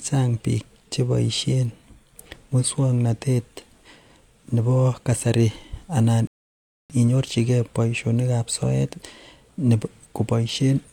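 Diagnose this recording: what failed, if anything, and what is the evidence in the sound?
The failure is at playback, in the streaming player's buffer: a rebuffering stall. At 6.27 s the speech stops dead and silence holds until 6.90 s, after which it picks up exactly where it broke off. What separates this from a network dropout or packet loss is that no speech is missing. The player simply ran dry and waited for data, so the gap adds about 0.63 s of time rather than removing any audio.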